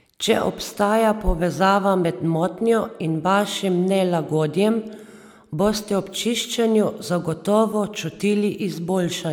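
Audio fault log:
No fault is logged for this speech clip.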